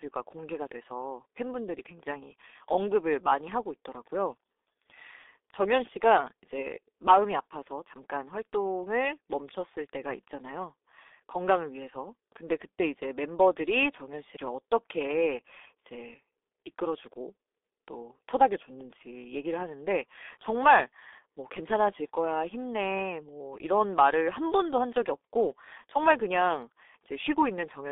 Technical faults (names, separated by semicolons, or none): G.723.1 codec